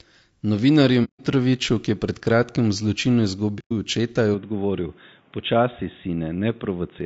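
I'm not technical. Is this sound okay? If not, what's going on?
No. The speech was likely sent through low-delay AAC compression, the kind video calls use, so the voice sounds rough and grainy throughout.

Twice, chunks of the stream were lost and the player filled them with silence. This is AAC frame loss with muting, heard as soft-edged gaps from 1.04 to 1.20 s and from 3.59 to 3.72 s, right after "pred kratkim v zločinu".

At 4.34 s the recording switched its input to a poorer device, probably another microphone or a headset, with no gap at the switch. From there to the end the voice is duller and muffled, with nothing above 3.8 kHz. It is also a little quieter, with a faint new background noise.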